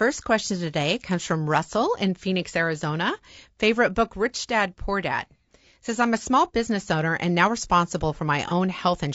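From the start the whole clip has that rough, grainy speech quality, with noise filling in between the harmonics and a thin, somewhat synthetic top end. That's most likely low-delay AAC compression, AAC-ELD style: short frames can't resolve pitch harmonics well, and the damage is plainly audible here, which fits a bitrate around 32 kbps.

Near the end, right after "owner and now responsible", there's AAC frame loss with concealment from 8.48 to 8.52 s. Roughly 30 ms of audio went missing, and the decoder patched it from the previous spectrum, so you hear a brief smeared, noisy blip.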